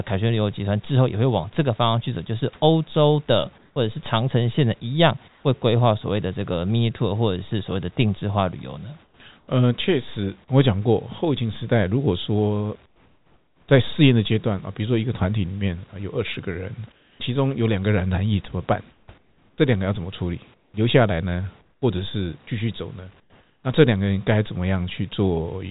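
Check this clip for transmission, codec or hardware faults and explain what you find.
Two kinds of fault are present: repeated comfort-noise substitution during pauses and two isolated sample-drop clicks. The steady room background, about 39 dB below the speech, belongs to the recording, and the coding noise of the call path is consistent with 64 kbps G.711 A-law.

Comfort noise in place of the background appears at 3.58–3.76 s, 5.28–5.44 s, 9.04–9.48 s, 12.86–13.68 s, 16.92–17.2 s, 18.92–21.82 s and 23.2–23.64 s. In each gap the real room tone, sitting about 33 to 36 dB below the loudest speech, gives way to a smoother synthetic hiss. Where the change can be measured, the fill is about 2 to 8 dB quieter, with the largest drop at 12.86 s. The likely cause is discontinuous transmission: the sender's voice detector halts audio in pauses and the receiver generates shaped noise, such as RFC 3389 comfort noise. 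The 18.92–21.82 s stretch holds about 0.96 s of substituted noise, split across pauses with normal background in between.

Dropped samples occur at 16.34 s and 24.76 s. Each is heard as a single sharp click and shows as a thin vertical line on a spectrogram. The sound points to the likely loss of only a couple of samples, a small fraction of a millisecond. That is far too short to remove anything audible, but the waveform jumps abruptly from one value to a later one, and that discontinuity produces the click.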